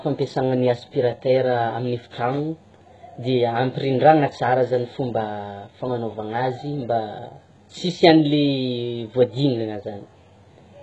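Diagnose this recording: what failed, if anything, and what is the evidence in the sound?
The codec stage is likely at fault: HE-AAC at a very low bitrate rebuilds the speech treble by band replication, so sibilants turn gritty and lispy throughout, with nothing above 11.5 kHz.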